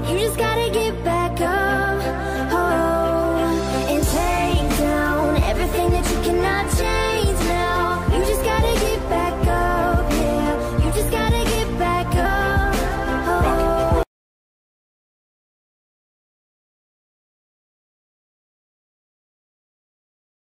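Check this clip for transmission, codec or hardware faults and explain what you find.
Two short jumps are audible, both from compressed frames being skipped. At 1.45 s the audio jumps ahead by about 50 ms, and at 12.24 s by about 70 ms. Those gaps fit whole frames of roughly 26 ms, two and three of them respectively. The decoder never plays those frames, so the sound resumes further on. Each join is where the sound cuts from one point straight to a later one. On a waveform the envelope shifts abruptly. A spectrogram shows a brief vertical discontinuity with harmonics misaligned across it.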